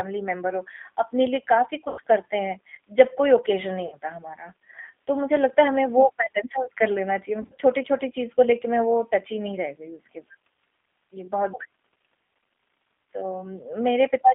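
From the start the speech carries G.729 codec damage, plainly audible: a slightly rough, synthetic texture from rebuilding each 10 ms frame with a vocal tract filter, a pitch predictor and a few pulses, consistent with an 8 kbit/s G.729A stream. The line passes roughly 200 Hz to 3.5 kHz, so a spectrogram shows a hard ceiling with nothing above it, and harmonics look smeared and grainy rather than cleanly striated.

VoIP packet loss concealed by the speech codec appears three times. From 1.88 to 2.01 s, about 100 ms of audio is missing, which fits five lost 20 ms packets. The decoder stretches the last pitch and filter into a fading, stretched sound, and the voice stays weak briefly after packets resume. From 3.86 to 3.96 s a shorter 60 ms gap does the same. From 7.42 to 7.59 s, 80 ms of losses are scattered across 160 ms, with runs of up to 40 ms, giving a stuttering, intermittently stretched passage. 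On a spectrogram each gap shows repeated, overly regular content decaying in level. The waveform shows an envelope that shrinks frame by frame before normal speech returns.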